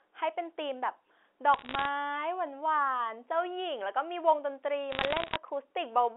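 Sharp ticks and crackle break over the speech from 1.54 to 1.86 s and more densely from 4.92 to 5.36 s: bit errors on a digital phone line, roughly half a percent then about one percent of bits flipped, each corrupting one G.711 sample on a line limited to 300 Hz to 3.5 kHz.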